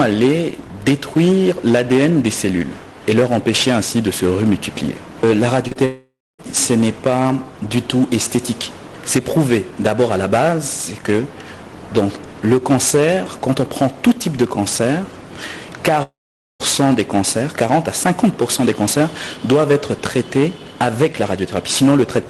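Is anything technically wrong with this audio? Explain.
Yes, there are two kinds of fault, heard through audio whose top end stops near 12 kHz, as a call codec such as Opus would produce.

Short concealed packet loss occurs twice in a row, at 5.67 to 5.73 s and 5.73 to 5.77 s. About 40 ms and then 20 ms of audio failed to reach the decoder in time. The receiver filled each gap by extending the preceding sound and then blending back into the real signal. The result is a brief smeared wobble rather than a clean gap.

A long network dropout is the likely cause of two longer breaks, at 5.85 to 6.41 s and 16.03 to 16.62 s, which lose roughly half a second each. The last sound carries on as a fading buzz or hiss, then gives way to silence lasting about 260 ms in the first break and about 480 ms in the second. The audio then resumes further on, and the missing part never plays.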